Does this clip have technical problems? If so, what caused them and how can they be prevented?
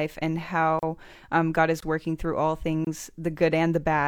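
Yes. The speech has gaps between stream segments at 0.79 s (35 ms), 1.80 s (21 ms, just before "working through all") and 2.85 s (24 ms, just after "is working through all"). These hard-edged silences recur about once per second, which fits 1-second segments whose timestamps leave small holes that the player fills with silence. Writing each segment's start timestamp to match the exact end of the previous one prevents this.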